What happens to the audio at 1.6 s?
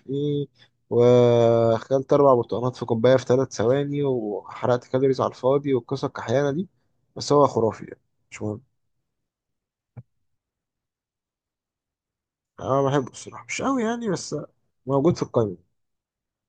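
Nothing goes wrong at 1.6 s; the speech there plays through intact, with no dropout, click or distortion.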